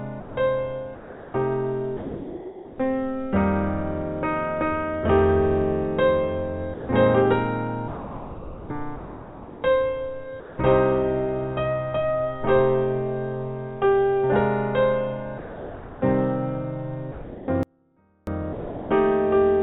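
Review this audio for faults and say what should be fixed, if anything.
Sound chopped by the voice detector appears from 0.2 to 2.78 s and from 7.88 to 10.58 s. Over these stretches the sending side likely toggled between transmitting and muting, so about 1.35 s and 1.65 s of sound respectively were swapped for comfort noise. The audio stutters. Lowering the voice-activity threshold or adding hangover time would keep transmission open through quiet passages.

Sound dropped by the voice detector occurs at 6.74–6.89 s, 15.38–16.01 s, 17.12–17.48 s and 18.53–18.89 s. Each time, quiet material was likely classed as background and not sent, and steady comfort noise filled gaps of 150 to 630 ms before the sound resumed. Disabling discontinuous transmission, or making the detector less aggressive, would prevent these losses.

An audio dropout to a faint residue runs from 17.63 to 18.27 s, roughly 640 ms. 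The signal abruptly falls to a faint leak around 35 dB below normal level while the path stays live, which likely points to a momentary break or mute in the capture or routing chain. Checking connections and input-switching logic upstream of the encoder would address it.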